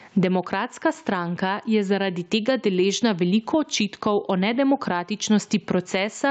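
Gain pumping runs through the whole clip, with a level swing of around 15 dB, likely from input gain set far too high with a fast limiter clamping the peaks. The speech sounds squashed, and nothing is audible above 8 kHz.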